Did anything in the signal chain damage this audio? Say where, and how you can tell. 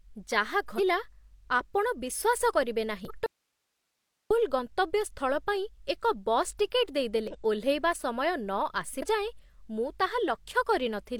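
Yes. There is damaged data in the compressed stream, at the codec stage: short glitches at 0.75, 3.05, 7.28 s (just after "ଏକ ବସ୍ ଟିକେଟ୍") and 8.98 s. Each one marks where the decoder lost sync and searched for the next frame header.

An audio dropout to a faint residue runs from 3.26 to 4.31 s. The speech cuts abruptly to hiss far below normal level, not a natural pause, likely from a signal break ahead of a still-live input.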